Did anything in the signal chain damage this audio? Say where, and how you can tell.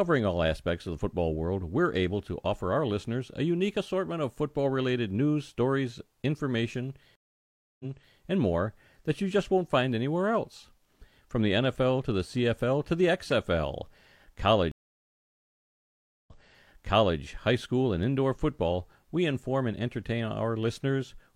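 Yes, a stream reconnect at the network stage, twice: from 7.16 to 8.17 s, after "related news stories information", the speech drops out for 0.64 s and resumes 0.37 s earlier, at "and more that you". From 14.72 to 17.19 s a 1.54 s gap is followed by a jump back of 0.93 s into "high school and indoor". The connection failed, the player reconnected, and the server resent buffered audio, so a fresh decoder started mid-stream with its first frame faded in.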